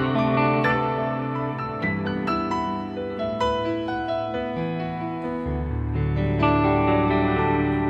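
No technical fault can be heard anywhere in the audio. There is nothing in the sound that needs a time or a cause.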